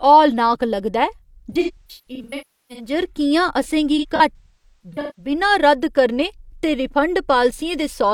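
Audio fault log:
1.51–2.94 s, AAC frame loss with concealment: about 0.94 s of frames dropped across 1.3 s, runs up to roughly 0.3 s, decoder repeats last spectrum, smeared, noisy patches dipping toward silence.
3.98–5.32 s, AAC frame loss with concealment: about 0.68 s of frames lost over 1.2 s, runs near 0.3 s, filled from stale spectra, giving phasey smearing and brief fades.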